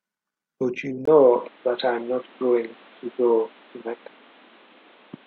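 Input switched to a poorer device at 1.05 s: after a brief gap, the speech loses everything above 4.3 kHz and gains background noise, likely from another microphone.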